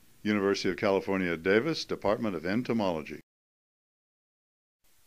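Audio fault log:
No fault can be heard anywhere in the clip. Nothing in the audio calls for a log entry.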